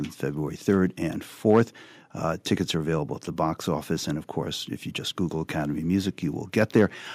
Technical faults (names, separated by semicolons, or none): microphone overload